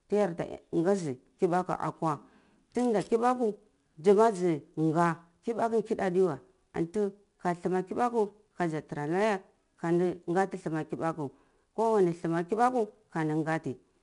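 From start to finish, the converter's sample clock wanders by something like ten microseconds, so each sample lands slightly early or late. This sample clock jitter adds a roughness around a couple of dozen decibels under the speech. It thickens on loud, bright syllables and disappears in the pauses.

Also present throughout, 4-bit ADPCM compression codes each sample as a coarse step from a prediction. Its damage is plainly audible as a gritty hiss riding every loud passage, with grainy attacks. Nothing is heard above 10.6 kHz, and the sound points to roughly an 89 kbps stream.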